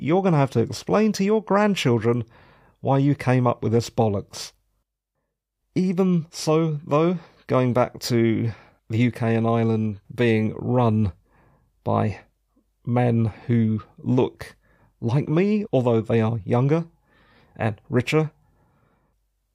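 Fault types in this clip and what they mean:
Nothing to flag here; listening through the speech, there's no technical fault to point to.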